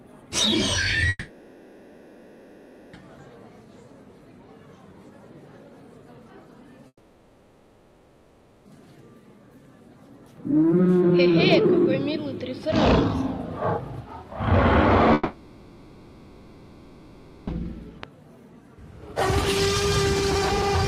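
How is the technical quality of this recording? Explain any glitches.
The recording has three gaps, at 1.09 to 2.95 s, 6.87 to 8.67 s and 15.13 to 17.49 s, each about two seconds. These are most likely long network dropouts: the receiver extends the last sound as a fading buzz almost to the end, briefly leaves silence in the first two, and then resumes past the missing audio instead of catching up.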